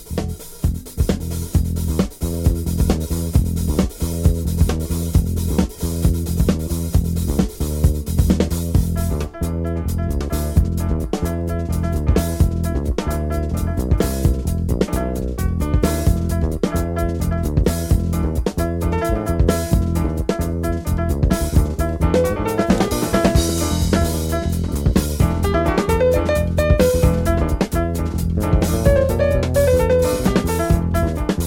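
Nothing is technically wrong with this audio, and no fault can be heard anywhere in it.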